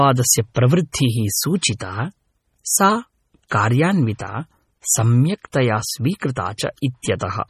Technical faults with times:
0.00-7.49 MP3 compression

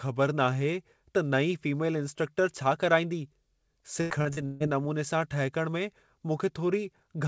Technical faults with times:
4.01-4.63 repeated packet loss (robotic sound)

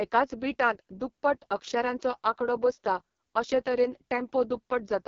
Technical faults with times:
0.00-5.07 AMR wideband (HD Voice) codec

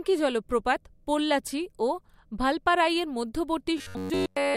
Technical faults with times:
3.78-4.57 robotic sound from repeated short buffers

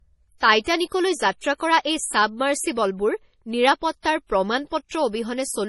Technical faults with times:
0.00-5.69 low-bitrate audio saved at a high bitrate

